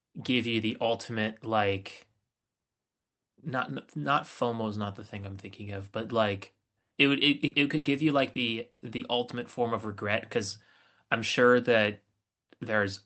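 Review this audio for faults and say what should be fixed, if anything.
Between 7.15 and 9.07 s, repeated packet loss makes the speech choppy. Five gaps, the longest 100 ms and about 260 ms in total, are each patched by extending the previous sound. Unlike a single dropout, these holes recur in close succession, so they produce a choppy stutter rather than one clean break. Forward error correction and an adaptive jitter buffer on the Opus call link would help prevent this.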